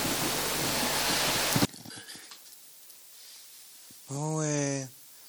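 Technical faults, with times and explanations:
1.65–5.29 s, one channel inverted: the level falls by about 36 dB and only a faint residue remains, with centred content and bass nearly gone. The likely cause is reversed polarity on one stereo channel, so shared material cancels in the mono sum.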